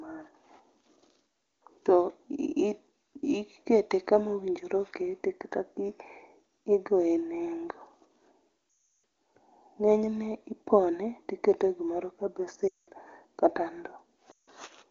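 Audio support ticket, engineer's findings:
Lost AMR speech frames at 8.69–9.03 s (340 ms), 12.68–12.88 s (200 ms), 14.31–14.49 s (160 ms): speech drops to near silence within two frames while the decoder repeats the last good frame with falling gain; rough recovery. Carried on AMR wideband (HD Voice) codec; clear band, consistent with a high-rate mode.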